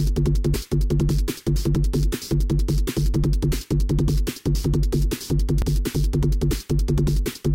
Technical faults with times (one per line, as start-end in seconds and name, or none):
5.62 dropped buffer (overrun)